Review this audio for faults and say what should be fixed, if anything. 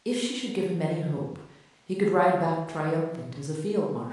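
Three sharp single clicks occur in the speech, at 0.63 s, 1.90 s and 3.46 s, each likely caused by dropped samples. At each point a fraction of a millisecond of the stream goes missing, so the waveform steps straight to a later value and the discontinuity sounds as a click. Unlike a dropout, no audible stretch of sound disappears and there is no gap or silence, only the isolated tick. Preventing it means giving the capture or transfer path enough buffering so that no samples are skipped.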